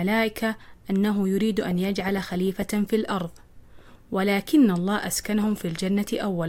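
From 5.44 to 5.70 s the speech is overlaid with DAB burbling. Weak reception has let bit errors slip past the error correction into the MP2 audio stream, so corrupted samples put short blips of noise in individual sub-bands and corrupted scale factors make sub-bands jump in level for up to a frame. The quarter-second burst points to roughly a dozen damaged frames, consistent with an error rate around half a percent, and it sounds like short blips of noise riding over the speech.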